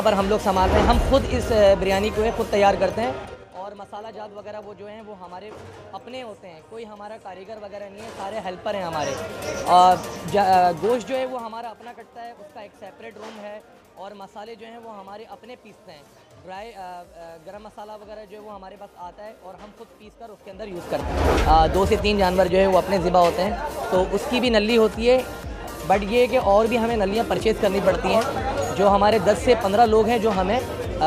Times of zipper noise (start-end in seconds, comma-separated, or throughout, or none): 20.43-21.08